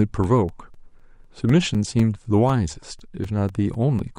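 From 0.24 to 4.0 s, periodic USB or driver dropouts silence a few milliseconds every 0.25 s, ticking through the speech as evenly spaced waveform gaps and thin vertical spectrogram lines.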